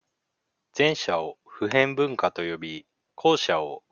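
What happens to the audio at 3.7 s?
Nothing goes wrong at 3.7 s; the speech there plays through intact, with no dropout, click or distortion.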